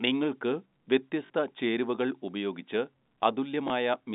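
Packet loss with the last packet repeated occurs at 1.26 s, just before "ചേരുവകൾ ഉപയോഗിച്ച്", and again at 3.68 s. Audio went missing for 40 ms and then 20 ms, consistent with two 20 ms packets and then one, and the receiver filled each gap by replaying the last good packet. The repeats seldom align with the pitch period, so the first gap briefly stutters with a robotic edge and the second is a small blip, over the narrow band-limited tone of the G.711 telephone line.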